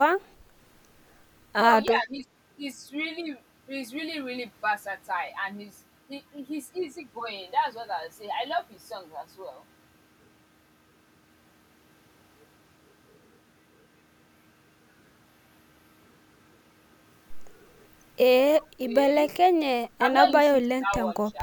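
From 1.89 to 2.26 s the speech dips by roughly 10 dB in brief patches, likely speech suppressed in double talk, where an echo canceller attenuated the talker while the far side was also speaking. Between 4.67 and 5.48 s five evenly spaced ticks, the longest only about 2 milliseconds, are CD scratch ticks, where damaged data recurring on each disc turn was muted or interpolated. The same double-talk suppression returns at 18.56 to 18.95 s, 19.97 to 20.03 s, 20.44 to 20.93 s and 21.3 to 21.4 s, with deeper cuts of around 15 to 20 dB.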